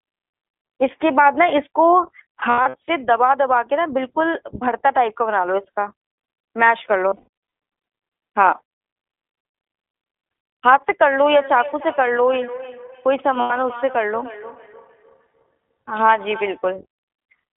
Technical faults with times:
0.00-17.56 iLBC codec
2.40-2.90 lost iLBC frames
7.08-7.28 lost iLBC frames
13.39-13.52 lost iLBC frames

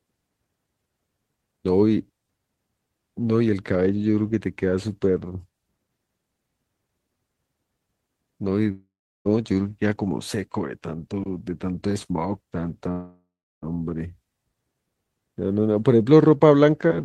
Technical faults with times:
8.71-9.28 long network dropout
12.91-13.65 long network dropout

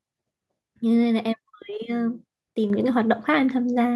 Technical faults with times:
2.70 microphone volume stepped up

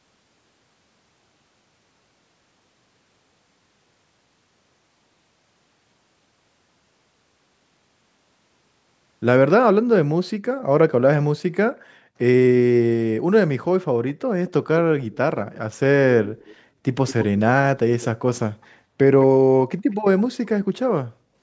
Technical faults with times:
14.08-14.14 echo leak
14.46-14.51 echo leak
15.11-15.58 echo leak
16.24-16.56 echo leak
18.01-18.06 echo leak
18.62-18.66 echo leak
19.90-20.21 echo leak

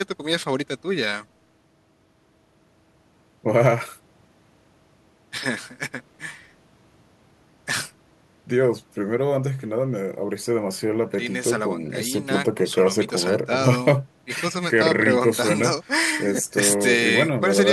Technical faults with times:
none

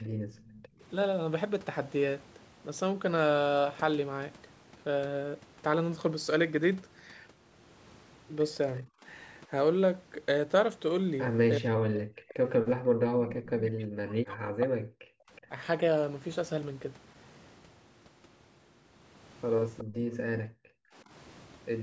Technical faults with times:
0.03-0.80 background gated by the echo canceller
0.36-0.59 echo leak
8.83-9.05 speech suppressed in double talk
11.59-15.51 speech suppressed in double talk
15.36-15.41 echo leak
19.78-20.42 echo leak
19.84-20.77 background gated by the echo canceller
21.05-21.10 speech suppressed in double talk

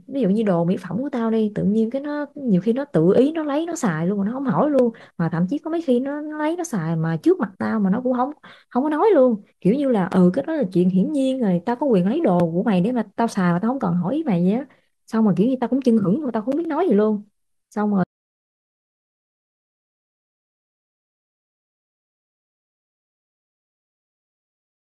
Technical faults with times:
18.04-24.93 audio dropout to silence

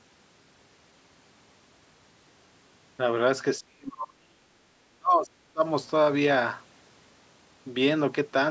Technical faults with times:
3.60-4.47 speech suppressed in double talk
4.95-5.62 speech suppressed in double talk

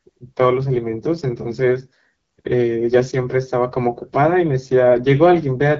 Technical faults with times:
0.00-5.79 AMR wideband (HD Voice) codec

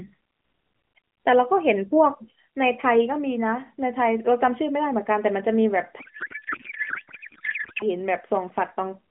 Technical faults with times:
6.00-7.84 codec payload misread

